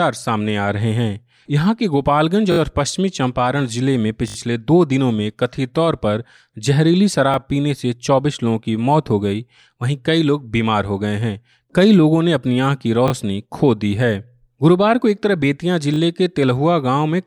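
Speech clip with a repeated buffer stutter in five spots: 2.52–2.58 s, 4.28–4.36 s, 7.34–7.36 s, 13.08–13.12 s and 15.94–15.98 s. Each time, the same tiny slice loops with a hard edge, giving a quick buzzy stammer. The repeat spacing fits a 20 ms buffer. Fresh audio didn't reach the output in time, so the device kept replaying its last chunk, and nothing seems to get dropped afterwards.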